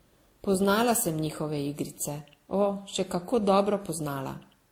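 Right through the speech there's a stacked, doubly-smeared texture with nothing above 20.1 kHz, likely transcoding between lossy codecs, which sounds like Opus followed by WMA 1.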